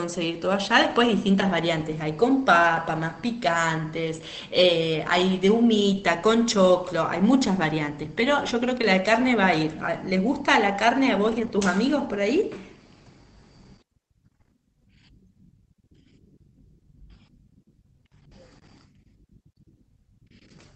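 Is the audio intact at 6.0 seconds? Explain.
No, not quite. At 5.93 s, one 20 ms packet was lost and rebuilt from error correction. The next packet carried a low-bitrate copy, and the decoder played that instead. There is no gap. That brief frame sounds rougher and noisier.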